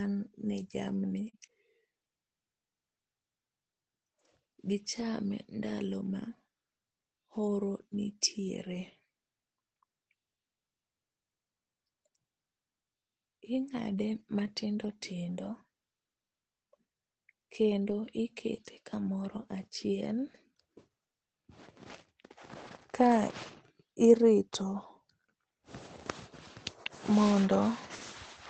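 At 1.29 s a short concealed packet loss occurs. About 40 ms of speech never arrived in time, and the decoder bridged 37 ms of it by extending the preceding sound before crossfading back into real audio. The result is a brief smeared wobble.

Later, the lost packet rebuilt from error correction appears at 5.69, 14.19 and 17.89 s, each spanning 20 ms, and again from 22.67 to 22.73 s over 40 ms, which fits two lost packets. Each time the decoder played the low-bitrate backup copy carried in the following packet of this Opus call, whose audio stops at 8 kHz. There is no gap, just a momentary roughness. On a spectrogram it appears as a narrow column of grainier, noisier texture.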